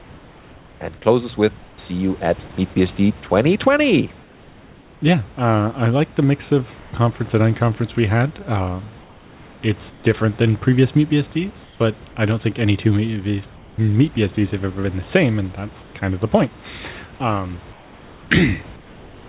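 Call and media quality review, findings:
Sound chopped by the voice detector, 1.58–2.76 s: speech choppy, quiet syllable edges and word tails dropped, about 240 ms replaced in total. Likely cause: the sender's voice activity detector toggling transmission on and off repeatedly, with gaps filled by comfort noise.

Comfort noise in place of the background at 4.22–5.02, 6.80–6.92 (between "I like the mix" and "conference and unconference we"), 9.02–10.04 (before "than previous meat"), 11.64–12.16, 13.56–13.78 (after "think any two meat"), 15.82–15.94, and 17.72 s to the end. In these pauses the room noise turns smooth and featureless, about 1–3 dB quieter, then snaps back when speech resumes. The background sits only about 26–29 dB below the speech. Likely cause: discontinuous transmission, with the receiver synthesising noise shaped roughly like the background while the sender is silent.

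The call path audibly stops at 4 kHz, which fits narrowband G.711 mu-law.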